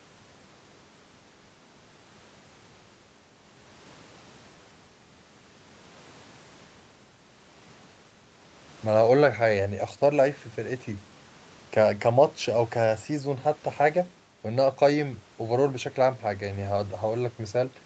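Speech audio, with no technical faults to report.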